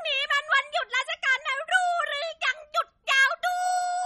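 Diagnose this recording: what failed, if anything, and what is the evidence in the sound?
Throughout the recording the speech has a watery, swirling texture, and s sounds carry a metallic chirp, which points to the codec stage and likely MP3 compression at a low bitrate, consistent with something near 32 kbps. With too few bits, the encoder has zeroed weak frequency lines that flicker on and off from frame to frame. A spectrogram would show a hard ceiling at 12.5 kHz across the whole clip, with patchy, blocky holes below it.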